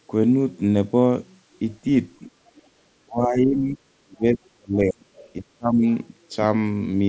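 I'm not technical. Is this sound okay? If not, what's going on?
No. The call's echo control struggled, and three kinds of fault are audible.

Other side's voice leaking through: the talker's device was playing the other caller on a loudspeaker, and the echo canceller, the part meant to scrub that sound from the microphone, likely missed some of it. Brief, faint scraps of a second voice slip in at 2.26 to 2.31 s and 2.57 to 2.62 s, with a slightly longer scrap at 5.15 to 5.29 s, sitting well below the main talker.

Background gated by the echo canceller: while the loudspeaker was active, the canceller clamped the microphone down to block echo. The room sound briefly sinks, not quite to silence, for about a tenth of a second at 2.64 to 2.75 s, then comes back once the canceller relaxes.

Speech suppressed in double talk: both sides were talking at the same time, and the canceller likely could not tell its own talker from the echo, so it turned everything down. 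The talker's voice dips and breaks up at 3.03 to 3.8 s and 4.04 to 5.06 s, where it falls furthest and comes close to vanishing in places, and again, more mildly, at 5.39 to 5.85 s. In each stretch, parts of the speech are muffled or missing.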